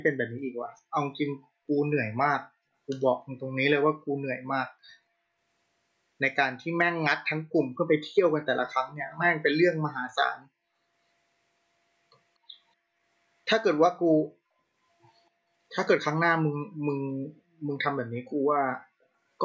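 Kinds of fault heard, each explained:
Echo leak, 9.08 to 9.18 s: a brief, faint copy of the speech arrives about 243 ms behind the original, sitting well below the main voice for roughly a tenth of a second before vanishing. The likely cause is a far end playing the call over a loudspeaker, where the echo canceller failed to fully subtract what its microphone picked up, so a scrap of the talker's own speech was sent back down the line with that delay.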